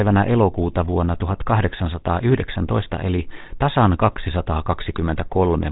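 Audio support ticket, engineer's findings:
Buzzy, gravelly roughness on the speech for the whole clip, plainly audible. Band-limited, nothing above about 3.8 kHz. Probable component: GSM full-rate codec, sound consistent with 13 kbit/s. Mechanism: vocal-tract filter driven by regularly spaced pulses, only every third excitation sample kept. Coarse excitation gives the rasp, and the narrowband path removes upper sibilance and air.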